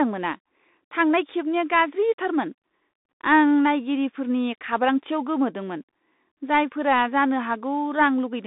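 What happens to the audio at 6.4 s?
At 6.4 s the speech is still passing through a Bluetooth CVSD headset codec, which affects the whole clip. CVSD sends one bit per sample, saying only up or down, and adapts its step size. Here the band runs from about 200 Hz to 3.7 kHz. Nothing is present above 3.8 kHz, so the sound is thin and muffled. The coding damage is plainly audible, and the sound fits a 64 kbps link.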